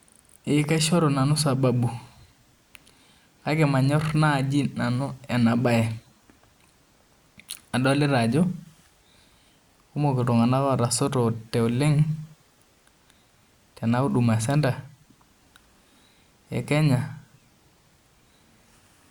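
Nothing in the speech recording points to a technical fault in the signal itself.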